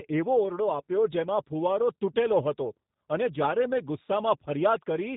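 Speech, coded throughout with G.729 at a rate consistent with 8 kbit/s. The codec rebuilds each 10 ms frame from a vocal tract filter, a pitch predictor and a handful of pulses, so the voice comes out plainly rough and slightly synthetic. On a spectrogram, energy stops sharply at 4 kHz and harmonics look smeared. The waveform shows smoothed, repetitive pitch-period shapes.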